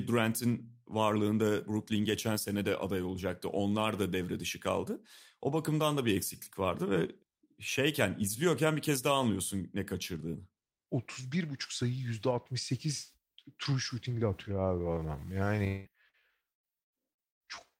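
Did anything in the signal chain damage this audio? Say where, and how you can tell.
Yes. Several stages left marks, all in the last few seconds.

From 14.39 s to the end, just after "true shooting ile", the pace suddenly drops to about 0.65 times normal speed while the pitch stays put. The audio drags. This is likely a time-stretched section, added in processing or playback. Software lengthened the audio to fit a duration and kept the pitch by repeating short slices.

At 15.67 s to 15.88 s there is a long network dropout. About 0.18 s of audio likely never arrived. The receiver filled almost all of it by continuing the last sound, which turns into a fading buzz or hiss. No silence opens up in this one. When the signal returns, the lost piece is simply gone, so the sound jumps ahead.

At 16.09 s to 16.16 s comes short concealed packet loss. Roughly 40 ms went missing on the network. The decoder bridged the hole by extending the preceding sound, then crossfaded back into real audio. 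You hear a brief smear or wobble. The patch is too short to register as a gap.

Inside that stretch, from 16.13 s to 16.15 s, a 20 ms packet was rebuilt from error correction. The following packet carried a low-bitrate copy of it, so the codec played that copy instead of leaving a hole. It sounds rougher and noisier than the frames around it.

From 16.51 s to 17.43 s there is repeated packet loss with a robotic sound. Four gaps, about 0.42 s in total, arrive close together. The longest is about 117 ms. Concealment covers about 43% of that span. Each patch re-voices the last sound before the next hole arrives. The result is choppy audio with pieces missing. This points to an unstable network path.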